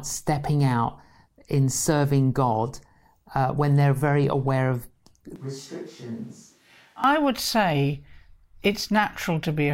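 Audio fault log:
5.36–7.04 s, switch to a distant microphone: the close microphone's feed likely dropped out, leaving a pickup much further from the talker to carry the speech. Right after "they're very aware of" the voice abruptly turns roomy and hollow, loses its low end and falls by about 10 dB, while room noise comes up to sit only about 30 dB below the speech. At "would say" the close, full sound snaps back just as suddenly.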